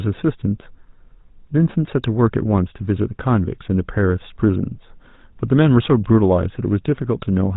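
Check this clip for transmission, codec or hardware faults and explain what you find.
One fault runs through the whole clip: the speech has passed through the GSM full-rate codec. The damage is plainly audible. The codec rebuilds the voice from a vocal-tract model driven by a thinned, regularly pulsed excitation, consistent with a 13 kbps stream. That gives a buzzy, gravelly roughness. On a spectrogram, energy stops sharply at 4 kHz, with coarse, smeared harmonics below.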